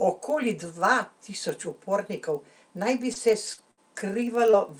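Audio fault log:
Throughout: filter restarted on every block. A filter in the chain loses its memory at each block boundary and starts again from silence, so every block opens with a small transient. These arrive at about 23.4 Hz, a steady low tick-buzz under the speech that rises and falls with its level. The rate fits a 2048-sample block at 48 kHz. It is loudest where the speech is strongest.
3.13 to 4.55 s: repeated packet loss (robotic sound). Over this stretch the stream drops out four times, and each hole is covered by stretching the last bit of sound forward, with about 140 ms missing in all and the longest gap 61 ms. The patches come close together, roughly a tenth of the span, so the speech turns choppy with a robotic edge and pieces clipped away.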